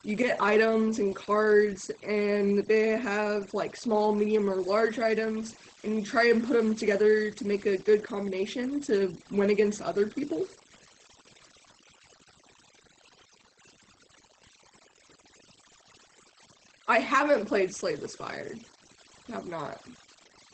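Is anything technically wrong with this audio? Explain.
Yes, two faults run through the whole speech clip.

Overdone noise removal: aggressive noise suppression cuts bands near its noise estimate, taking quiet speech with them, leaving a lowered, twinkling background.

Opus voice compression: SILK-mode Opus at a low rate, consistent with about 12 kbps, leaves nothing above 8.6 kHz and coarse excitation, so the speech sounds muffled, hoarse and slightly robotic.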